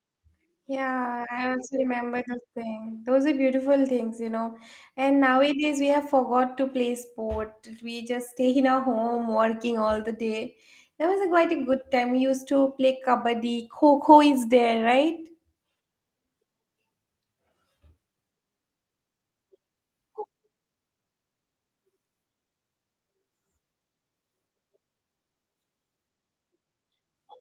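No technical faults can be heard anywhere in this speech recording.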